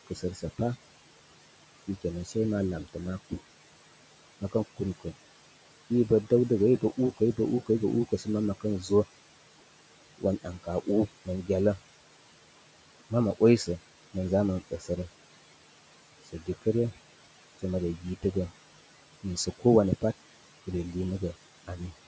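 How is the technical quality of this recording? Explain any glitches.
The quality is compromised by aggressive noise suppression, with steady processing artefacts and repeated cutting of the speech itself.

Noise suppressor artifacts run throughout. The suppressor pulls down bands it judges to be steady noise by about 18 dB each frame, so the residue swells under words. A spectrogram shows patchy, flickering noise specks between dark gaps instead of an even floor.

Speech cut by the noise suppressor occurs at 0.07–0.6 s, 1.87–3.4 s, 4.41–8.9 s, 10.18–11.79 s, 13.1–14.9 s, 16.25–18.24 s and 19.23–21.81 s. Soft consonants and word endings, treated as noise, are dipped by about 14–18 dB, briefly in each span (longest around 4.41–8.9 s), sounding swallowed. Waveforms show abrupt notches; spectrograms show weakened high-frequency consonant energy.

Room noise sits about 16 dB below the speech, and the call microphone processing passes nothing above 8 kHz.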